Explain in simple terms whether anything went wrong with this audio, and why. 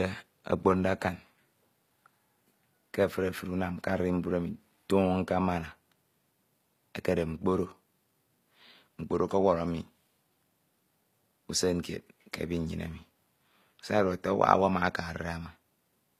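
HE-AAC compression runs through the whole speech clip, start to finish, and is plainly audible, likely from this codec. It keeps only the lower frequencies and fakes the treble by copying lower parts upward. The copied highs don't match, so s sounds turn gritty or lispy, and nothing survives above 14.9 kHz.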